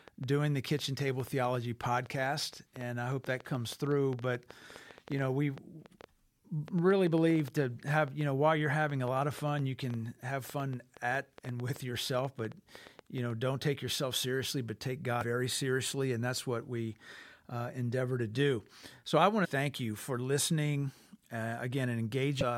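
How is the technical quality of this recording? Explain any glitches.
The recording has two distinct problems: a long stretch of ticking through the first 13 seconds, and three brief corruption blips near the end.

From 0.08 s to 13.3 s there is a train of clicks. Something is injecting short pulses into the signal, most likely electrical interference from nearby equipment or a faulty connection or power supply. The pulses arrive about 6.2 times per second at an uneven pace, roughly 70 in all, and peak about 5 dB above the speech. They are heard as popping that continues through the pauses.

At 15.21 s, 19.44 s and 22.41 s there is damaged data in the compressed stream. At each point part of the encoded file is wrong, so the decoder cannot read those frames properly and loses its place until it finds the next valid frame header. Each event lasts about 20 ms and comes through as a short glitch breaking into the audio.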